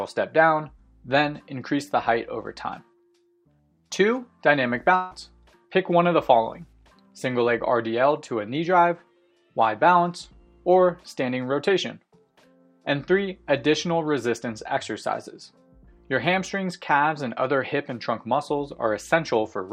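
At 4.95 s the sound turns into a smeared, buzzy continuation of what came just before, fading over about 0.15 s until 5.13 s. The audio then resumes with roughly 0.16 s of material gone. It never drops fully to silence. This is a long network dropout, likely a run of lost packets that the receiver patched by extending the last sound. On a spectrogram the band looks smeared and repetitive, then breaks off sharply. The waveform shows a decaying envelope and then a discontinuity.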